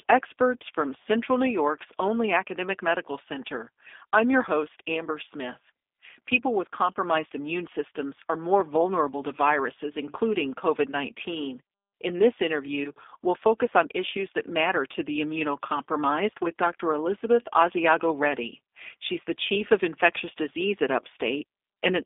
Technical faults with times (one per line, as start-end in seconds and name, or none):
0.00-22.05 G.729 codec